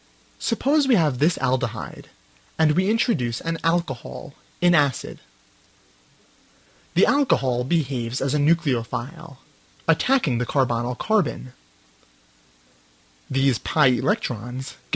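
At 7.77 to 7.82 s the audio briefly hangs: the sound just before that point is held on for about 30 ms too long, heard as a buzz or a dip, and then it carries on from where it stopped with nothing skipped. This is a short stall from a late packet. A packet missed its playout time, the jitter buffer ran dry, and the receiver stretched the last sound to cover the gap. Playback then resumed 30 ms later than before. The audio also passed through a WebRTC call path, and nothing above 8 kHz comes through, which fits G.722 at 64 kbps.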